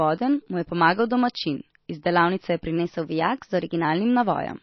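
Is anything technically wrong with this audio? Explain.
Yes, there are two problems.

Throughout the speech the treble stops sharply at about 5.8 kHz, and the sound has a watery, swirling quality, with s sounds that chirp and consonant onsets that smear. This is likely MP3 compression at a low bitrate, which fits roughly 24 kbps. Starved of bits, the encoder discards everything above a fixed cutoff and drops quiet frequency lines that flicker in and out between frames. A plain low-pass filter would also dull the sound, but it would not add that shimmering, metallic texture.

From 2.77 to 3.85 s the speech plays about 6.5% fast and sits roughly 108 cents higher, just over a semitone, then snaps back to normal. A drift correction step is the likely cause: clock-matching software raised the playback rate all at once to drain its buffer, so speed and pitch rose together. A pitch-shifting effect would change pitch without changing timing, and a gradual clock drift would slide rather than jump.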